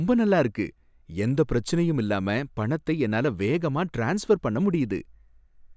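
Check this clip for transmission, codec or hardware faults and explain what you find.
Nothing to flag here. I listened through the whole clip and didn't catch anything worth pointing out.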